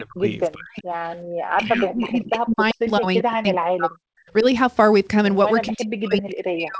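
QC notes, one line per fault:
0.00–0.24 s, 0.54–0.85 s, 1.57–4.23 s and 5.71 s to the end, speech suppressed in double talk: the echo canceller likely could not tell the near talker from loudspeaker echo while both sides spoke, so it attenuated everything. The speech sinks deeply, by roughly 35 to 40 dB at worst, thinning and breaking into fragments. The long stretch from 1.57 to 4.23 s loses about two seconds of speech in total.
1.25–1.29 s, background gated by the echo canceller: with the loudspeaker active, the canceller clamped the microphone hard for about 40 ms, then released it. The room sound drops abruptly by about 23 dB, leaving a brief hole in the background before the ambience snaps back. The band stopping at 8 kHz fits the G.722 wideband path.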